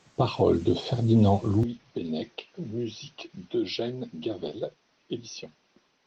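Input switched to a poorer device at 1.63 s and lasting to the end: with no gap, the speech abruptly loses everything above 6.2 kHz, drops roughly 10 dB and picks up faint new background noise some 45 dB down, likely a different microphone taking over.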